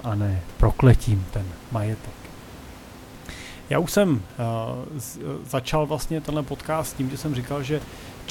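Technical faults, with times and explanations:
Nothing in the recording points to a technical fault.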